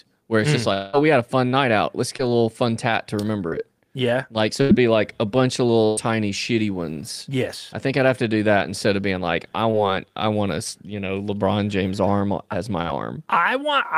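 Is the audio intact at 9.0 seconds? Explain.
Yes, the speech at 9.0 seconds plays through intact, with no dropout, click, distortion or other fault at that moment.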